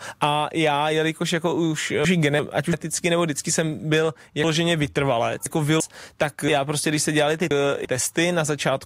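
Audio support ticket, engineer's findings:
Jumbled, garbled stretches at 2.05–2.73 s, 4.44–5.80 s and 6.49–7.85 s. Chunks out of order: 0.34 s blocks played late, one block late at first, then three, giving three hard joins each. Buffer or reassembly stage likely mis-sequencing.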